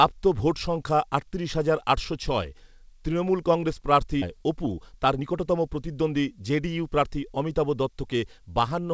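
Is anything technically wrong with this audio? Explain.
Yes. There are two playback faults in this speech.

A skip ahead happens at 4.22 s. About 0.7 s of speech is dropped, and the two sides are joined directly with no gap.

A jitter buffer speed-up follows, from 4.34 to 7.18 s. The receiver trims short pitch-period pieces to clear the backlog, so the speech runs at 112% and sounds hurried at unchanged pitch.

The call codec's band limit at 8 kHz is also present, as expected for G.722.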